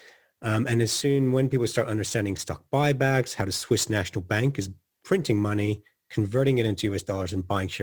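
A fine hiss and grittiness rides on top of the speech for its whole length, thickening on louder syllables and on bright sibilant sounds and dropping away in the pauses. That behaviour points to sample clock jitter. The converter's clock wanders by something like 7 microseconds rms, so each sample is captured at a slightly wrong moment, and the resulting error, roughly 25 dB below the signal, scales with how steeply the waveform is changing.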